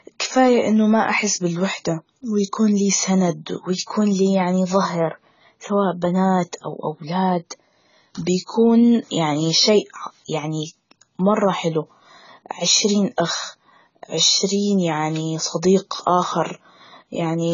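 Speech with heavy AAC compression throughout, likely from low-bitrate AAC-LC encoding. Nothing sounds above 7 kHz, so the voice is dull and muffled, and sibilants and sustained vowels carry a warbling, fizzy smear that fits a bitrate around 16 kbps.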